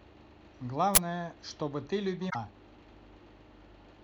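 At 0.95 s a short, loud burst of harsh digital noise cuts across the speech and lasts until about 0.98 s. This is an uninitialised buffer: a block of audio was sent to playback before anything had been written into it, so whatever data was left over in that memory was played out as if it were sound. The burst lasts about 23 ms, which fits a 1024-sample buffer.

From 2.26 s to 2.36 s there is a brief, unnatural glitch that breaks the flow of the speech for roughly a tenth of a second. This comes from damaged data in a compressed stream. Some of the encoded bytes at this point were corrupted or lost, so the decoder could not read those frames correctly, lost its place in the stream and had to search for the next valid frame header before it could resume normal decoding.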